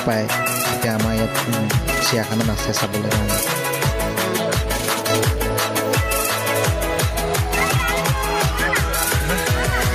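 Gain pumping runs throughout: the level swells in the gaps and ducks around 10 dB under each loud sound, likely from excessive input gain driving a fast limiter.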